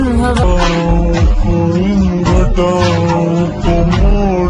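From 0.43 s to the end, the sound drops into a wrong sample rate: slowed to 0.73x and about 5.5 semitones flat, which fits 44.1 kHz material played at 32 kHz.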